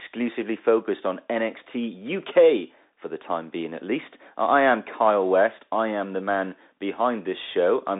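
Bluetooth CVSD headset codec, present throughout: the speech is squeezed into a 250 Hz to 3.7 kHz band with nothing above 3.8 kHz, fitting a 64 kbps one-bit delta stream whose adaptive step lags sharp rises, so loud highs distort, s sounds turn scratchy, and granular hiss sits underneath.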